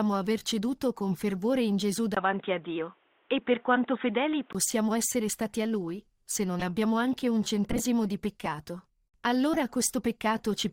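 From 2.15 to 4.55 s the input likely switched to a poorer device: after a 20 ms gap the speech loses everything above 3.8 kHz and turns dull, with faint new hiss, at the same overall level. Corrupt frames were then decoded despite flipped bits, misplacing energy into short chirps and noise bursts at 4.67, 6.59, 7.71 (loudest, near -15 dBFS) and 9.54 s.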